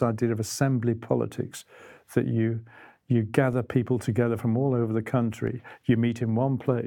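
A speech clip with two DC steps, at 3.53 s after "politics that you you" and at 5.47 s after "from all over the": the waveform baseline jumps by about -36 dBFS, giving a low thump, then drifts back as a 20 Hz high-pass bleeds it off. A spectrogram shows a brief broadband vertical line.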